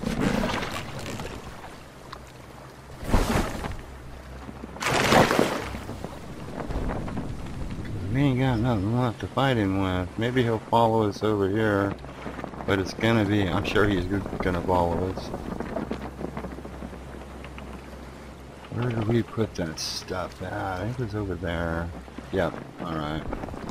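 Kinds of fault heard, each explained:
DAB burbling: at 0.49, 4.83, 11.80, 13.39, 18.56 and 22.12 s, uncorrected bit errors throw MP2 sub-band levels off, giving brief noise blips and level jumps in sub-bands.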